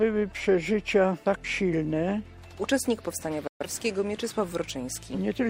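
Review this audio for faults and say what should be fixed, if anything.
A digital broadcast dropout mutes the sound from 3.47 to 3.66 s. The receiver lost valid frames and faded to silence within 3 ms, losing 128 ms of programme. The waveform shows a flat gap, and the spectrogram shows a blank vertical band. Better reception or stronger error protection would prevent it.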